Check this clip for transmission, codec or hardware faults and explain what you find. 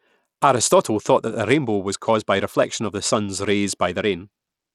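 One fault runs through the whole speech clip: plainly audible coding damage, most likely Bluetooth SBC compression, where a tight bit budget, consistent with roughly 96 kbps, starves the upper sub-bands, so treble flickers out and gritty, aliased noise clings to the sound.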